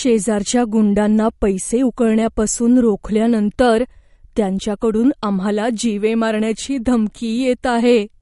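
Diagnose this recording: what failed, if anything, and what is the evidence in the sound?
Codec stage: the speech carries plainly audible damage throughout, likely from MP3 compression at a bitrate near 48 kbps. Nothing sounds above 11.2 kHz, and s sounds turn watery as weak frequency lines flicker between frames. A spectrogram shows a flat ceiling at 11.2 kHz over speckled gaps.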